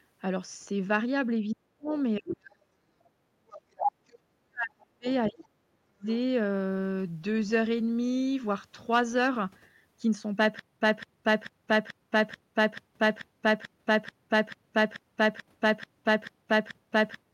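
From 1.54 to 2.46 s the speech sinks, at worst by roughly 40 dB. This is speech suppressed in double talk, likely the echo canceller turning down both voices at once. From 2.29 to 2.34 s the other side's voice leaks through, about 10 dB below the speech, likely residual loudspeaker echo left in the microphone. From 2.74 to 2.78 s the background is gated by the echo canceller. The room sound drops about 18 dB and then returns. From 3.06 to 6.07 s the speech is suppressed again, for about three seconds, likely by the same double-talk ducking. During that stretch the other side's voice leaks through twice, likely as uncancelled echo. From 3.53 to 3.85 s it is nearly as loud as the talker. From 5.06 to 5.43 s it is far fainter.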